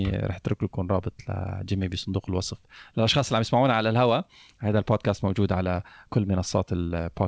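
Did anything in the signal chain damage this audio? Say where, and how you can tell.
No, nothing in the signal chain damaged this audio; the speech went through a G.722 call path, which leaves nothing above 8 kHz.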